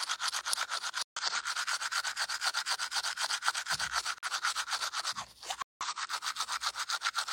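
Corrupt frames muted: damaged compressed frames were rejected and replaced with silence, cutting abrupt gaps into the sound at 1.03–1.22 s, 4.18–4.30 s and 5.62–5.86 s, with the timing intact.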